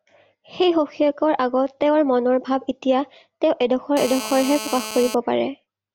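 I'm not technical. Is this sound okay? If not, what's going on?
No. A mobile phone on the older 2G network was close to the recording equipment during a call, and the audio circuitry picked up its radio signal, producing what's known as GSM phone buzz. From 3.97 to 5.15 seconds, a harsh, raspy buzz sits over the speech. It pulses about 217 times a second, matching the phone's transmission rhythm, and stays steady throughout because the phone was on a call.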